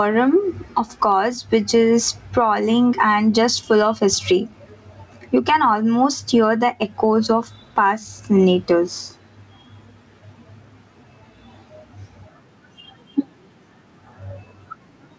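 Throughout the speech, the level pumps, swinging by roughly 15 dB, so loud and quiet passages sound squashed together. This gain pumping is likely from input gain set far too high, with a fast limiter clamping down on each peak.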